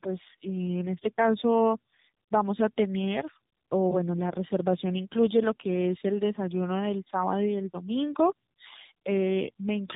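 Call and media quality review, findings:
Tandem speech coding, whole clip. Rough, muffled, warbly speech, nothing above about 3.8 kHz. The sound points to two speech codecs in a row, likely a G.723.1-type coder then AMR-NB, with a G.711 leg between them. Each transcode re-encodes the previous coder's artefacts. Unlike a single narrowband codec, the roughness and warble compound beyond what the 3.8 kHz band limit alone explains.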